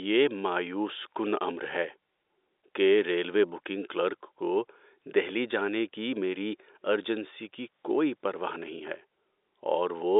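Nothing stood out on listening to this telephone-band speech recording.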